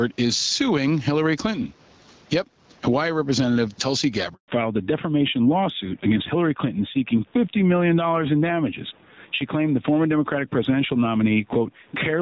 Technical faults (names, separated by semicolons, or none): gain pumping; handover gap; fallback to narrowband